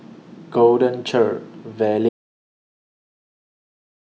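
The input signal was likely lost at 2.09 s, through a disconnected device or failed link, while recording continued writing silence. This audio dropout to silence cuts the speech off mid-flow, leaving dead silence with no room tone through the end of the clip.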